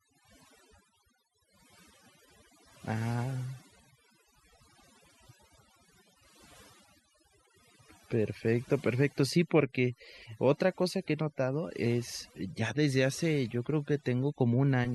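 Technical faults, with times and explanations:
Throughout, overdone noise removal: the background sinks to near silence sprinkled with twinkling specks. An overly aggressive noise reducer is cutting individual frequency bands whenever they sit close to its noise estimate, taking quieter speech detail along with the noise.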